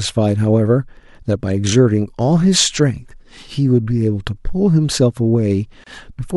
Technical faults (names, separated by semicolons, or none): gap at a join of encoded pieces